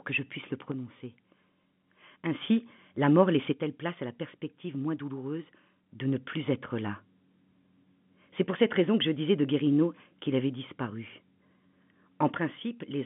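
Right at the tail, from 12.37 s to the end at 13.06 s, the speech suddenly sinks by about 6 dB and stays there, riding over the narrow telephone band. That's most likely one channel drops out: one stereo side went missing before the mono sum, halving the shared signal.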